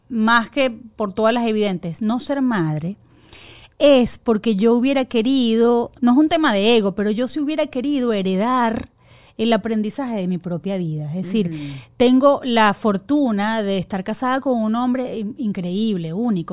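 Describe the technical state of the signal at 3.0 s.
The speech at 3.0 s is intact, with no technical fault heard at that moment.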